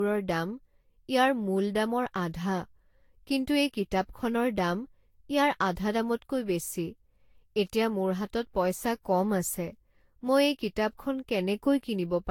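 Generation loss runs throughout this speech clip: the sound is swirly, smeared and hollow, with blurred consonant attacks and nothing above 18.4 kHz. It likely comes from roughly seven successive lossy encodes near 70 kbit/s Vorbis, each requantising on a shifted frame grid.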